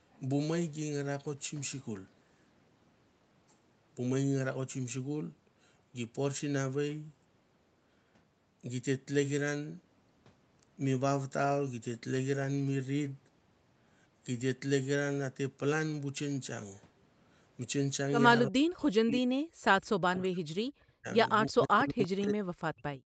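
An echo canceller likely mistook double talk for echo, causing speech suppressed in double talk: from 18.48 to 19.48 s, 20.07 to 21.07 s and 21.48 s to the end, the speech drops by around 40 dB. At 22.02 to 22.08 s, an echo leak, likely from a loudspeaker echo the canceller missed, brings back a faint scrap of the voice about 346 ms late and roughly 25 dB down.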